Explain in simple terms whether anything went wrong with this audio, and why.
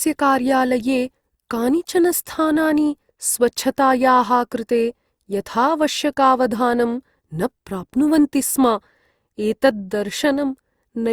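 Something did go wrong, all the way through: it sounds swirly and hollow, with blurred starts to sounds. That's generation loss, likely from the speech being re-compressed a few times over.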